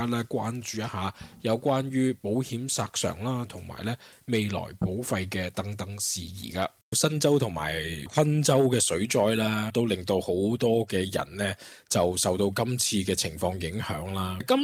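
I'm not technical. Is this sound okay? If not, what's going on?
Yes, no faults can be heard.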